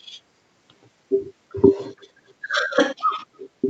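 Right around 1.97 to 2.03 s there's a brief echo leak: a very faint, delayed copy of the speech pokes through for about 60 ms, trailing the original by roughly 335 ms. It sounds like a ghost of what was said a third of a second earlier, well down under the live speech. The likely cause is a far end on a loudspeaker whose echo canceller let a scrap of its mic pickup slip back. All of it sits below 8 kHz, the top of the call's band.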